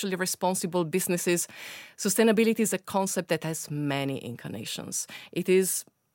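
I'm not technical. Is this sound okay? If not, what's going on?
No. The system likely lost a tiny sliver of audio twice (dropped samples), causing sharp clicks at 3.17 s, just before "that has many", and 4.67 s, just after it.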